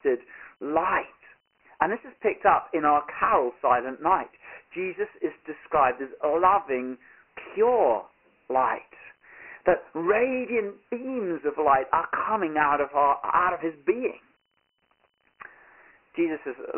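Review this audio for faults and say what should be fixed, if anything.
Dialogic VOX ADPCM, throughout: the speech carries a heavy gritty hiss, and nothing reaches above 3 kHz, which fits 4-bit ADPCM at 6,000 samples a second, about 24 kbps. The coarse adaptive quantiser steps leave grain trailing the speech, within a 300 Hz to 3.5 kHz telephone band. To prevent it, record or keep the source as 16-bit linear PCM at a higher sample rate instead of VOX.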